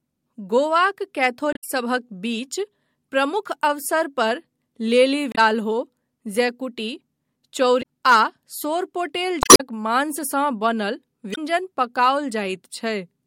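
At 1.53 to 1.64 s, just before "बीच प्रमुख अवसर पर", the speech is broken by damaged data in a compressed stream. The same fault recurs at 5.32 to 5.38 s, 7.79 to 7.83 s, 9.40 to 9.61 s and 11.32 to 11.38 s. Corrupted bytes make the decoder misread frames and hunt for the next valid header. That is heard as a chirp, squawk, click or short hole rather than the smoothed fill of packet-loss concealment.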